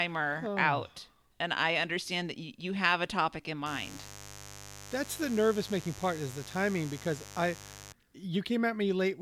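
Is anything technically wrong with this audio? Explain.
Yes. From 3.66 to 7.93 s there's mains buzz: 50 Hz switching spikes leaking in produce a raspy harmonic buzz, roughly 15 dB under the speech.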